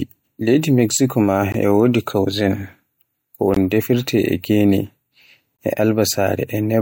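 Gaps between chunks at 1.52, 3.54 and 5.57 s cut silences of 21 ms into this speech, spaced 2 s apart. The sound arrives in 2-second chunks with silence inserted at each join, which fits codec padding or late chunk starts. Nothing is lost.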